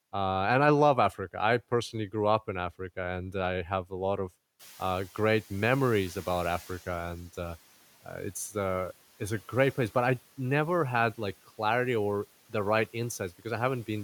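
Just after "have a lot of", the room noise jumps by about 19 dB, and from 4.59 to 6.87 s the noise suppressor is catching up: its noise estimate lags, so the noise passes with less reduction at first, then sinks by about 8 dB over 2.28 s before "and uh". A spectrogram shows a raised noise floor fading gradually.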